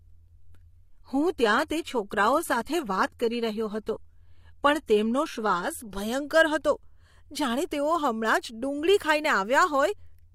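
From 0 to 6.0 s, an adaptive stream starting at a low bitrate gives synthetic, smeared treble fitting 20 kbit/s HE-AAC, then steps up seamlessly to fuller sound reaching 14.9 kHz, with no rebuffering gap.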